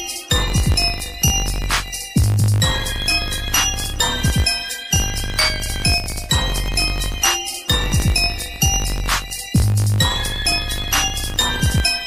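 A steady buzz at 50 Hz runs under the audio for its full length. The cause is a filter restarted on every block. The filter loses its memory at each block boundary and starts again from silence. Each restart leaves a small transient. These arrive 50 times a second, which points to blocks of about 20 ms. The buzz is not fixed in level. It grows louder and softer with the sound itself.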